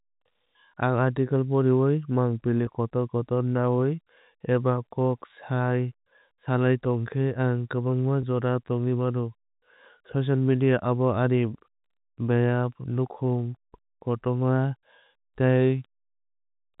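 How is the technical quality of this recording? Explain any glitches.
Two brief glitches interrupt the speech, each a momentary held, buzzy blip, at 2.66 s and 8.22 s. This is packet loss with pitch repetition: about 10 ms went missing, and the receiver filled it by replaying the last pitch cycle. The narrow telephone sound, with nothing above 4 kHz, comes from the G.711 telephone coding carrying the call.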